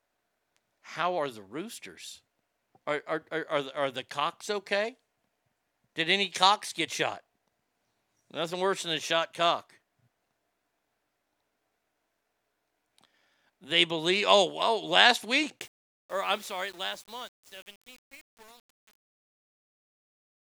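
A speech recording whose fade-out, beginning around 15.6 s and ending at 20.5 s, was processed at too short a word length with no dither, consistent with 8-bit truncation, causing truncation distortion on the fade: the tail turns gritty and stepped.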